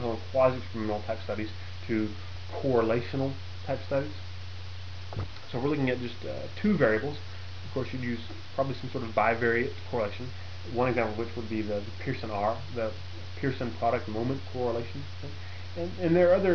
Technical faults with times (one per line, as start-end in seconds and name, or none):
none